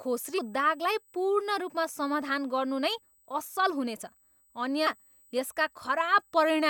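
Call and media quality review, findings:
USB whine throughout: steady fixed-pitch whine at 8 kHz, strongest at its 16 kHz harmonic, roughly 35 dB below the speech. Probable component: USB interface power or ground. The 125-microsecond microframe current draw leaks into the analogue path.

Damaged data in a compressed stream: short glitches at 0.37 to 0.39 s, just before "दागलाई पूर्ण", and at 4.86 s. Probable component: the compressed file or transport. Corrupted frames lose decoder sync until it finds the next frame header.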